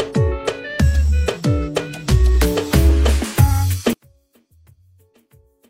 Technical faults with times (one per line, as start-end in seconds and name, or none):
3.93-5.70 one channel inverted